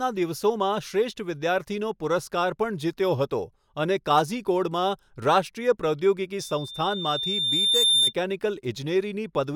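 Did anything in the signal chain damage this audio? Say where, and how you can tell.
Yes: there's a loudspeaker feedback squeal in the acoustic loop between playback and mic, from 6.38 to 8.13 s. A lone 3.6 kHz tone swells over about a second and a half, ending about 5 dB above the speech. The mic is hearing its own speaker, and loop gain tops one there.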